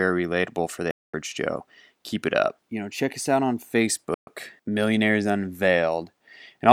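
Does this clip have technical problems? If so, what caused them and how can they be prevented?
Yes, there's a digital broadcast dropout twice, at 0.91 to 1.14 s and 4.14 to 4.28 s. The receiver lost good frames and muted with a 3 ms fade, so those bits of speech are just gone. A stronger signal, better antenna placement or more robust error protection on the transmission would keep frames decoding cleanly.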